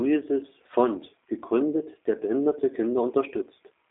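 A speech clip that has passed through a G.729 codec from start to finish, with the damage plainly audible. The signal is squeezed into a band of roughly 300 Hz to 3.5 kHz, and the narrow 8 kbit/s stream rebuilds it from a vocal tract model, a pitch predictor and a handful of pulses per frame. The result is thin, telephone-like speech that is still intelligible but has a rough, slightly synthetic edge throughout.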